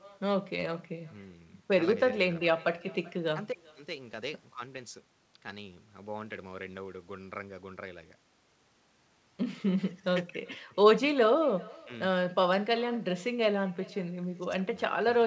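Speech with echo with no canceller throughout: a faint copy, about 26 dB down, trails each phrase by roughly 0.4 s, a discrete delayed repeat rather than room reverb's smooth tail.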